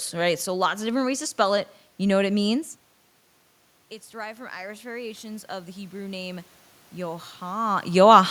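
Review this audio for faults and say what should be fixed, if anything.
Automatic gain rising, 4.1 to 7.71 s: after the input drops about 16 dB, gain climbs about 7 dB, swelling voice and noise floor into a gradually widening waveform and brightening spectrogram. Use fixed gain or slower gain-control attack.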